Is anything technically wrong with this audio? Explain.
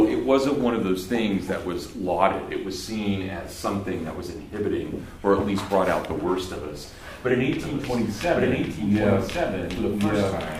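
Yes. From 7.6 s to the end, a doubled audio track appears: a second full-band copy trails the original by about a second, around 5 dB quieter. Most likely a slower capture path is recording the same signal again. Unlike an echo or reverb, the copy has no decay or room colour and cuts in abruptly.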